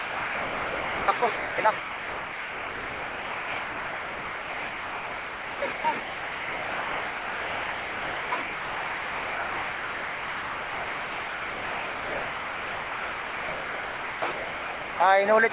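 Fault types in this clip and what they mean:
Sound dropped by the voice detector: The audio keeps giving way to steady noise, then returns. This happens from 0.0 to 1.08 s, at 1.2 s, 1.36 to 1.58 s, 1.78 to 5.62 s, 5.72 to 5.84 s, 6.0 to 8.32 s, 8.42 to 14.22 s, and 14.32 to 15.0 s. The likely cause is a detector at the sender treating the sound as background and halting transmission. The receiver then fills the gaps with comfort noise.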